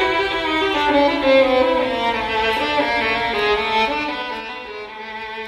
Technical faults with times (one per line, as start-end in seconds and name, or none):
3.76-4.60 zipper noise